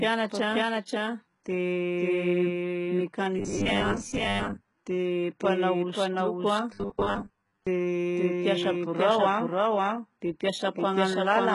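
Throughout the speech, a doubled audio track plays: a second full-band copy at about the same level trails roughly half a second behind, with no decay or room colour, which rules out echo or reverb. It was likely captured twice by a slower path. Heavy HE-AAC compression also runs the whole way through, at what sounds like about 12 kbps. Nothing remains above 11.1 kHz, and the treble below that is synthetic and metallic, with gritty s sounds rather than simply dull ones. From 3.39 to 4.70 s, just before "dia mpanao", and again from 6.74 to 7.67 s, the speech turns into a rigid 100 Hz buzz. This is robotic sound from repeated short buffers, most likely a 10 ms chunk looped while real audio is skipped. About half the sound is repeated in the first stretch and most of it in the second. The fixed pitch sets it apart from codec warble.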